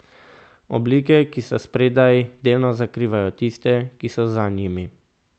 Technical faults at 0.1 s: none

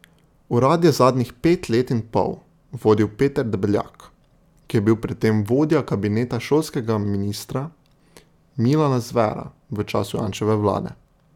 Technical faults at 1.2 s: none

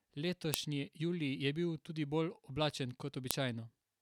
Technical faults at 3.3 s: file header played as audio

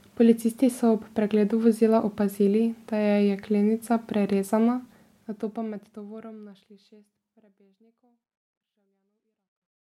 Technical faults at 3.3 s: none

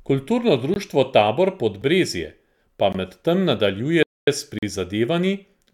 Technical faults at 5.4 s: none

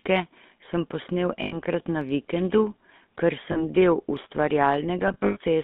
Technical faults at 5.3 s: GSM full-rate codec; lost GSM frames

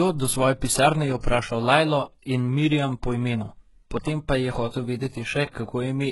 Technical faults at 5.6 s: HE-AAC compression; pre-echo

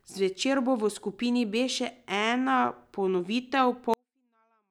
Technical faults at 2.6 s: none

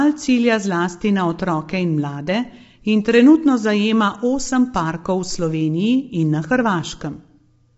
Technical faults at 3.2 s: low-delay AAC compression

